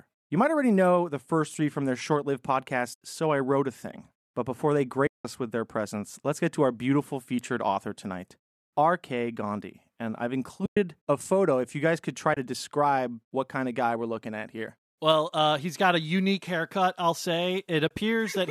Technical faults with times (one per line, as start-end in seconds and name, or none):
2.94-3.01 AAC frame loss with muting
5.07-5.25 AAC frame loss with muting
10.65-10.77 AAC frame loss with muting
12.34-12.37 AAC frame loss with muting
17.88-17.91 AAC frame loss with muting